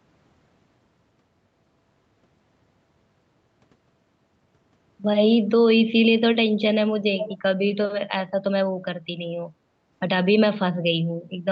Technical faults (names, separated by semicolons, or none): echo leak